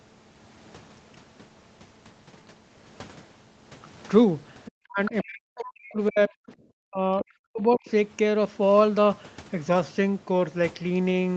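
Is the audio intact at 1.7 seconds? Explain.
Yes, at 1.7 seconds the speech is intact, with no fault at that moment.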